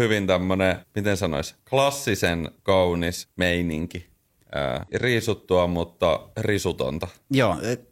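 A short speech recording with three brief glitches from damaged data in the compressed stream, at 1.54–1.59 s after "tämmönen miten sanois", at 4.83–4.88 s just before "riisuttua mutta", and at 7.48–7.53 s. Each lasts about 50 ms and sounds like a chirp or blip. Corrupted bytes in the encoded frames make the decoder misread them and lose sync until it locks onto the next valid frame header.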